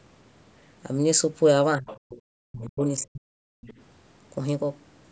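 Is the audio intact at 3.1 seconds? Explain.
No. From 2.99 to 3.32 s the speech is suppressed in double talk, most likely because an echo canceller could not tell this talker apart from loudspeaker echo while both sides were speaking, and turned the whole signal down to be safe. At 3.1 s the speech sits inside that dip: it sinks by roughly 40 dB at its deepest and stays down for about a third of a second before returning.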